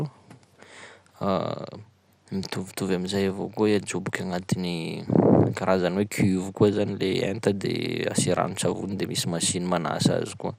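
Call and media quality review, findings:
MP2 compression, throughout. Speech dull, gurgling, granular. Nothing above 15.7 kHz. Likely cause: low-rate MPEG Layer II encode, consistent with about 80 kbps. Too few bits for its 32 sub-bands, so upper bands drop out and flicker, and the remaining bands are coarsely quantised. Damage plainly audible.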